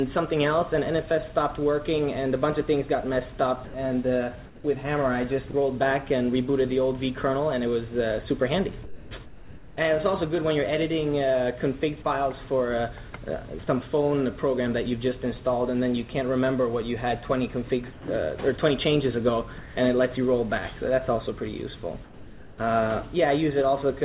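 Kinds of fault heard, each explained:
Sound chopped by the voice detector: between 3.65 and 5.54 s the sender's voice detector likely toggled on and off repeatedly, so around 300 ms of quiet sound in total gives way to brief synthetic fill, leaving that passage choppy.
Sound dropped by the voice detector: at 8.84, 13.10, 17.93 and 19.58 s, quiet sound was likely judged to be background and not sent. Gaps of 30 to 270 ms of steady synthetic noise replace it until transmission resumes.
Comfort noise in place of the background: from 8.84 to 9.77 s and from 22.04 to 22.58 s the real background is swapped for flat, featureless noise, likely generated by the receiver during discontinuous transmission. In the second stretch the noise sits about 4 dB lower.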